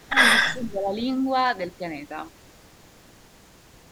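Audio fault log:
0.00–0.04 s, echo leak: a very faint copy of the speech trails about 310 ms behind, likely the far end's echo canceller letting some loudspeaker pickup through.
0.05–0.17 s and 0.53–0.93 s, speech suppressed in double talk: the level drops sharply in the first, more gently in the second, likely an echo canceller ducking the talker during overlap.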